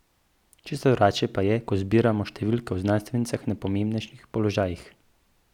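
Dropped samples at 2.72 s, between "je ko zbiramo številke" and "o znanstvenicah na", and again at 4.63 s. Each is a single sharp click in the speech, a thin vertical line across the spectrum. The likely cause is a couple of samples missing from the stream, a gap far shorter than a millisecond. The waveform jumps straight from one value to a later one, and that step, not any lost sound, makes the click.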